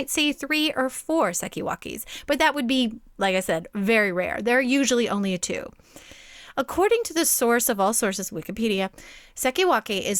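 No technical faults can be heard anywhere in this speech recording. Nothing in the audio calls for a time or a measurement to be marked.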